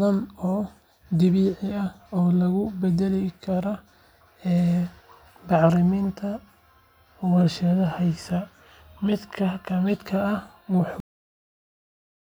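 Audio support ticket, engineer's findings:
Cut-off end at 11.00 s: speech stops mid-sound and drops straight to digital silence for the last 1.3 s, no decay at all. Looks like the final buffers never got flushed to the writer or output, so the tail just isn't there.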